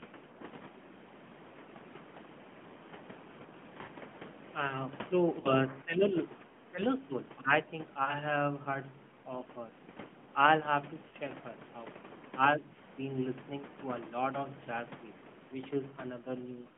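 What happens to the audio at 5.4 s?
Between 5.40 and 5.54 s, radio errors caused lost AMR speech frames. The decoder discarded them and repeated its last good pitch and vocal tract settings at falling gain. The roughly 40 ms gap, which fits two 20 ms frames, sounds brief, drawn out and fading.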